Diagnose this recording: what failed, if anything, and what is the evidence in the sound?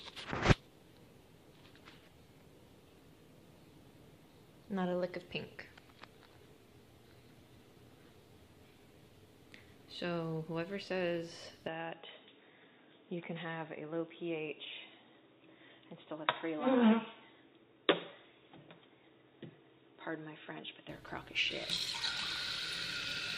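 At the driver or device level, the input was likely switched to a poorer device partway through. From 11.68 s to 20.89 s the sound turns dull and boxy, with nothing above 3.8 kHz, and it drops by roughly 5 dB. A different background noise sits roughly 40 dB under the signal. The change comes with no gap at the switch, and at 20.89 s the full bandwidth and original tone return just as abruptly.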